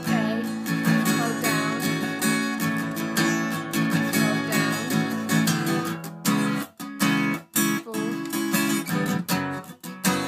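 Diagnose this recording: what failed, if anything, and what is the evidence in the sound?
No fault found in any stage.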